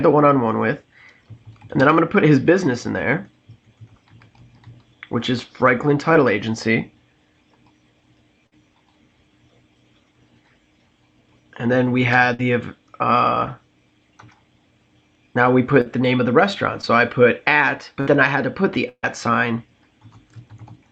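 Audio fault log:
6.13–6.17 s, 15.81–15.87 s and 16.81–16.85 s: short concealed packet loss. Brief smears or wobbles where 20 to 40 ms of sound arrived too late, and the receiver stretched the preceding sound across each gap.
8.47–8.54 s, 12.34–12.41 s, 18.01–18.17 s and 18.89–19.05 s: burst of packet loss. Each sounds like a held buzz or fading hiss, then a jump. About 60 ms went missing in a row in each of the first three. In the last, 140 ms was lost, and the stretched sound dies away into about 50 ms of silence before the audio resumes.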